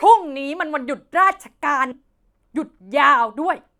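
Stream segment skipped at 1.91 to 1.94 s: the speech jumps abruptly forward with a brief blip, likely because one segment failed to load and playback resumed at the next.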